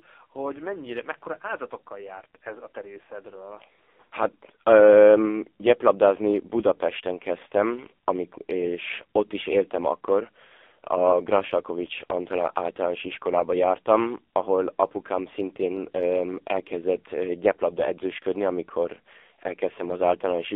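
From start to end, the speech carries heavy AMR narrowband mobile codec damage. Content is confined to roughly 300 Hz to 3.6 kHz, and the coarse pulse-driven vocal-tract model makes it buzzy and synthetic, which fits a low AMR-NB mode around 6 kbps.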